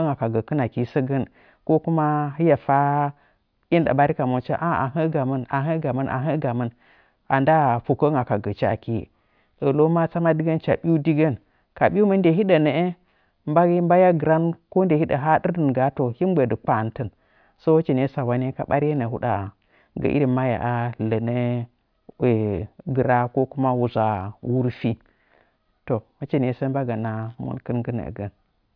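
Speech recording with no technical faults to report.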